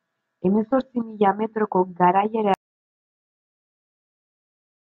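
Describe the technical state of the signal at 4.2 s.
At 4.2 s the signal is in an audio dropout to silence that begins at 2.54 s and runs to the end of the clip. The speech stops abruptly mid-flow and what follows is silence, with no room tone or noise floor underneath. That points to the input being lost while recording or encoding carried on writing empty samples, likely from a disconnected device, a failed link or an accidental mute.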